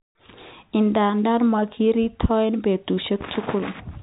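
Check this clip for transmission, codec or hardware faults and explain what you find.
Nothing here sounds wrong; the speech simply has the narrow, boxy character of an ordinary landline call, with everything above about 3.8 kHz gone and only the faint, level-following hiss that G.711 telephone coding always carries.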